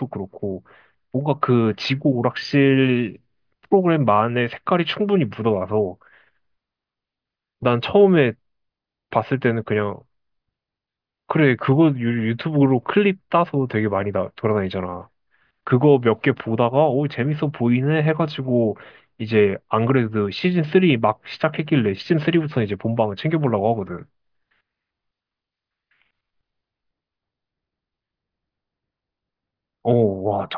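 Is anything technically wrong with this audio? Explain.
No, nothing is technically wrong with this audio.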